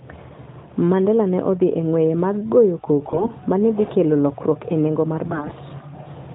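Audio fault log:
3.08–3.30 s, AMR bit errors: after "e ng'weye mag goyo", the sound turns hoarse, scratchy and gargly until "ma ne dhi kelo". Flipped low-priority frame bits misplaced excitation pulses and skewed fine pitch, gain and spectral values.
5.28–5.53 s, AMR bit errors: after "lokruok e nengo mar", the same gargly scratchiness returns. Corrupted weakly protected bits, roughly one in seven, misdrove the codec's voice model.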